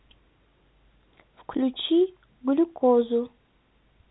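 No technical faults can be heard in this speech recording. It carries the sound of G.711 telephone coding: nothing reaches above about 3.9 kHz, and any quantisation noise riding under the level is faint at most.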